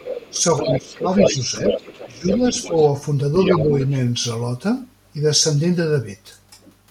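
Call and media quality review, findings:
Echo canceller likely left loudspeaker pickup in mic path; other side's voice leaking through 0.0–2.88 s and 3.4–3.92 s, roughly 5 dB under talker.

Canceller likely unable to split talker from echo, attenuating both; speech suppressed in double talk 0.31–1.69 s, 2.05–2.75 s, 3.49–3.75 s, dips about 10, 20, 5 dB.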